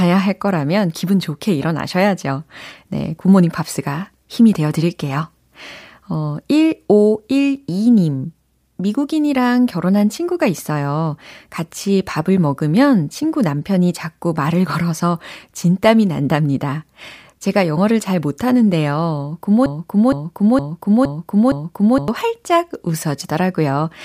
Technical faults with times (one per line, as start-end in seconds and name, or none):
19.66-22.08 broken-record loop